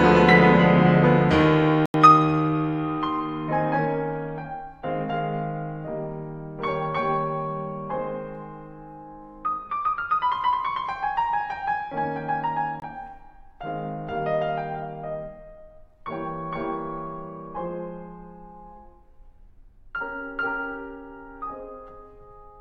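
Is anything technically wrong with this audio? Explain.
Yes. The music has two blocks of digital silence, at 1.86–1.94 s (85 ms) and 12.80–12.82 s (21 ms). Each is a stretch of zeroed samples, likely from an unfilled output buffer; the longer gap fits a 4096-sample buffer. Each is heard as a short hole where the sound cuts out and back with no fade. On the waveform it is a flat line; on the spectrogram it is a blank vertical band.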